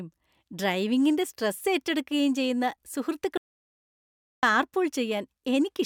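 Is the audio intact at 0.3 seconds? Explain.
Yes, at 0.3 seconds the speech plays through cleanly, with no dropout, click, distortion or other fault at that moment.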